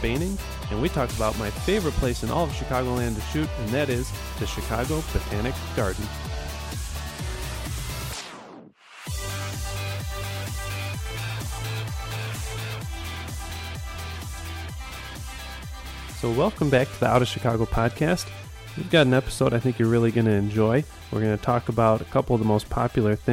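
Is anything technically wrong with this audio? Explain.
No, nothing technical stands out here; it all sounds fine as far as I can hear.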